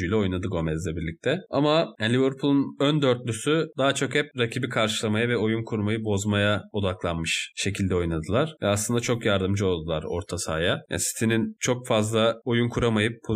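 No technical faults are audible.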